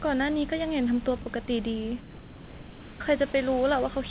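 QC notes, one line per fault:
1.22–1.26 s, 1.46–1.48 s, 2.0–3.0 s, 3.32–3.34 s, sound dropped by the voice detector: speech gives way to steady comfort noise, likely because quiet speech was judged background. The spectrogram shows harmonics cut off into flat noise below 4 kHz, and the waveform flattens to even low-level hiss.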